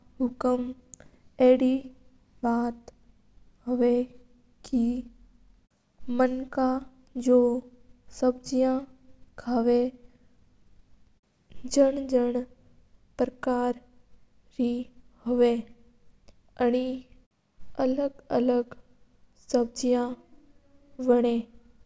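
No technical faults can be heard anywhere in this speech recording.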